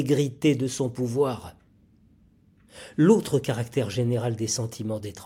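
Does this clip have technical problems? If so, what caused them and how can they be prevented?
No, nothing in this speech recording points to a technical fault, so there is no cause to trace and nothing to prevent.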